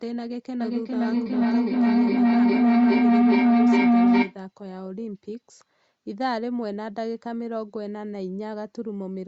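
From 0.6 s to 4.42 s, a feedback howl: a microphone hears a loudspeaker on the same call, and each trip round the loop returns louder. The sound narrows to a tone near 200 Hz, pulsing about every 0.4 s and peaking about 12 dB above speech.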